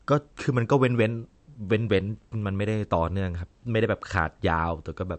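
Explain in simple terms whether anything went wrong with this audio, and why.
Something did go wrong, from start to finish of this speech clip. The sound is dull and watery. Nothing can be heard above 8.3 kHz. The likely cause is MP3 compression squeezed too hard. To save space, the encoder cut the treble and threw away quieter detail.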